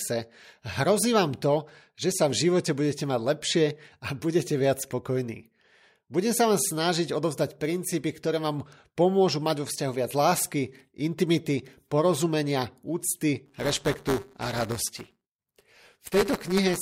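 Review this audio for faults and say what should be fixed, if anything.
Buffer tearing from 13.46 s to 16.82 s: a rattling 188 Hz buzz, which fits a 256-sample buffer where a small slice of each period replays audio from about 10 ms earlier. A waveform shows regular hard discontinuities, and a spectrogram shows a vertical-stripe comb at 188 Hz intervals. Keep the writer's position locked safely ahead of the hardware read pointer and resynchronise after an underrun or overrun.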